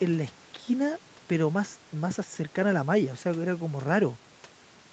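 Speech, with no technical faults to be heard.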